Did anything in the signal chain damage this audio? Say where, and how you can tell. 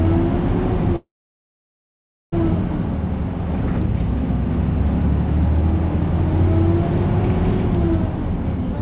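Yes: call audio freeze, 0.96–2.34 s. A brief fading fill, then 1.25 s of silence, likely from a network stall draining the jitter buffer. Playback resumes where it stopped, with nothing missing.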